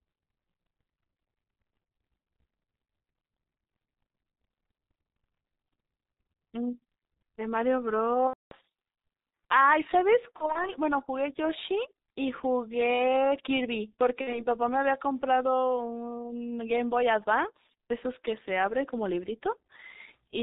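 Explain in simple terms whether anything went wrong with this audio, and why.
Yes, a couple of things. The whole clip went through the G.723.1 codec, an old internet-phone format, so the speech sounds muffled and hoarse, with smeared consonants.

There's also VoIP packet loss concealed by the speech codec at 8.27–8.54 s, 10.36–10.69 s and 14.21–14.46 s. Chunks went missing, and the decoder guessed from the last bit of sound, so you hear a buzzy or noisy, fading smear.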